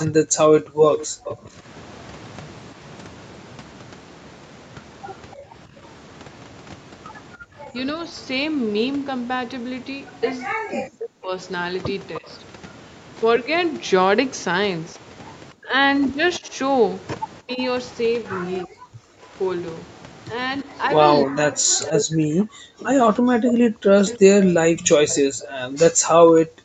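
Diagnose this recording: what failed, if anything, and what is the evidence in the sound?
Call processing is where this goes wrong. There's an echo leak: a delayed copy of the speech trails the talker at 0.0 to 1.36 s, 12.15 to 12.28 s, 16.34 to 18.64 s and 21.83 to 25.51 s, lagging 280 to 330 ms and sitting about 15 to 20 dB down. That's likely a loudspeaker echo the far end's canceller didn't fully remove.

Speech suppressed in double talk runs from 0.08 s right to the end. The talker's level keeps dipping, at worst by around 40 dB, whenever the other side is active. The likely cause is the echo canceller failing to separate its own talker from the loudspeaker echo and turning both down.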